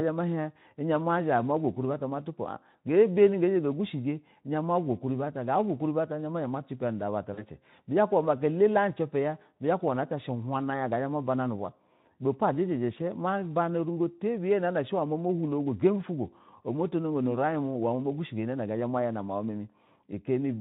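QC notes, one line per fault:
7.33–7.45 s, VoIP packet loss concealed by the speech codec: about 40 ms went missing, fitting two lost Speex frames. The decoder extrapolated its last pitch and filter at falling gain, a brief buzzy or noisy smear. Spectrogram: smeared, repeated harmonics fading out. Waveform: near-identical cycles shrinking, recovering gradually after 7.45 s.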